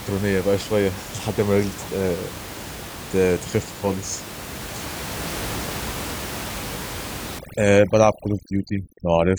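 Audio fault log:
7.39 to 9.39 s, overdone noise removal: noise reduction set too strong cuts every frequency band near its noise estimate. The room noise, about 12 dB below the speech, drops and breaks up into twinkling specks, and the voice's quieter parts vanish.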